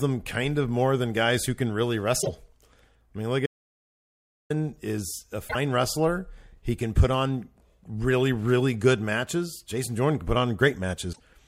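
A broken MP3 bit reservoir is the likely cause of the short glitches at 2.21 to 2.29 s, 5.47 to 5.56 s and 11.12 to 11.20 s. Frames were lost, so the following frames reach back for borrowed data that isn't there. Each event jumps ahead and leaves about 0.08 s (roughly three 26.1 ms frames) of chirp, noise burst or gap.

An audio dropout to silence runs from 3.46 to 4.50 s. The speech cuts off abruptly into about 1.04 s of silence with no room tone, likely because the input signal was lost while recording continued. Whatever was said in that interval is missing.

Periodic USB or driver dropouts occur between 5.84 and 9.85 s. A few brief losses of roughly 2 ms each are spaced 2.0 s apart and filled with silence. Each one that falls on speech is heard as a regular tick or pop.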